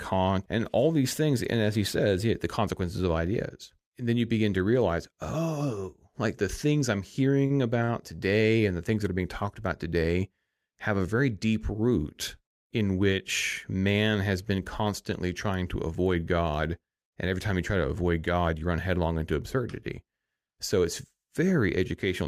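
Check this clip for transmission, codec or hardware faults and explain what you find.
Two short stalls from a late packet, both in the speech around 7.5 to 7.9 seconds. At 7.46 to 7.52 s, just after "like the things I'm", and again at 7.84 to 7.90 s, a packet arrived late and the jitter buffer ran dry. The receiver held the last sound for 37 ms and then 43 ms until it came, so nothing is lost, but the sound briefly hangs with a faint buzz or dip before picking up where it stopped.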